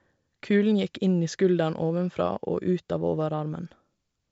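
No technical faults are audible.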